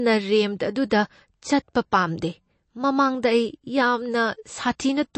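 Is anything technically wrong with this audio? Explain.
Yes, the whole clip carries plainly audible damage, most likely from MP3 compression at a low bitrate, which fits something around 36 kbps. Short of bits, the encoder cuts everything above 8.3 kHz and drops quieter frequency lines, which then flicker on and off between frames. The speech sounds dull, watery and swirly, with chirpy sibilants. A spectrogram shows a hard ceiling at 8.3 kHz and patchy, blinking gaps in the upper bands.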